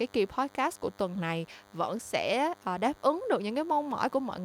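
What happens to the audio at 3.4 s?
At 3.4 s the DECT cordless phone buzz is present, running throughout the clip. The audio circuit rectifies radio bursts arriving every 10 ms, leaving a thin, steady buzz well below the speech. A spectrogram shows evenly spaced horizontal lines at 100 Hz and its harmonics.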